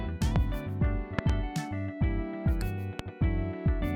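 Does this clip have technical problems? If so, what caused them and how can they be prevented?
Yes, there are three loud pops at 0.36–0.38 s, a double one at 1.19–1.32 s, and 2.99–3.02 s, sitting about 15–20 dB above the sound, which carries on underneath. They're likely voltage spikes from a plug, switch or static. Secure connections and avoid switching while recording.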